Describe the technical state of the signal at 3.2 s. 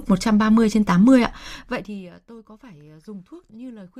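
At 3.2 s the speech signal is intact, with no fault present and no abrupt change in level.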